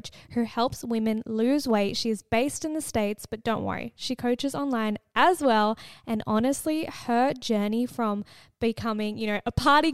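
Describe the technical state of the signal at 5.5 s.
At 5.5 s the speech signal is intact, with no dropout, distortion, glitch or other technical fault audible at that moment.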